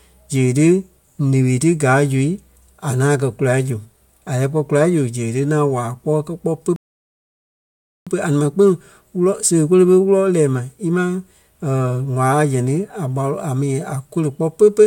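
Speech clip with one rebuffering stall from 6.76 to 8.07 s: the player ran dry, went silent, then picked up exactly where it stopped, adding about 1.3 s.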